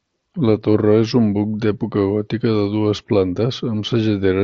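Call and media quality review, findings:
Nothing stood out on listening to the speech carried over the Bluetooth mSBC headset link.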